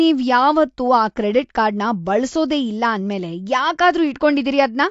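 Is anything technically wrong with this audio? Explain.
Yes. Throughout, the speech was likely squeezed through AAC compression at a low bitrate, around 32 kbps. Nothing is left above 7.6 kHz, so it sounds dull, smeared and warbly.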